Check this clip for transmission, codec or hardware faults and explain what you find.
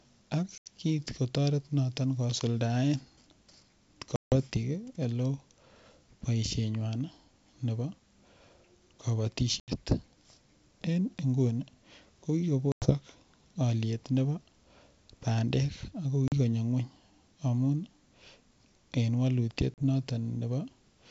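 Six dropouts point to packet loss on an ADPCM call. The underlying G.722 wideband coding sounds clean and open up to about 7 kHz, which fits its full-rate mode.

The packet losses fall at 0.58–0.69 s, 4.16–4.36 s, 9.60–9.76 s, 12.72–12.92 s (after "nguni ko"), 16.28–16.33 s (between "bandek ako" and "ng'wony amun") and 19.74–19.83 s (after "en walutiet"). They drop 80, 160, 80, 100, 40 and 40 ms of audio, each a few packets' worth. The missing packets become silence. Because the receiving decoder's predictor and step size no longer match the sender's, the speech restarts with a brief level or distortion error before it resettles. On a waveform each loss is a flat, hard-edged gap. A spectrogram shows a clean vertical blank band.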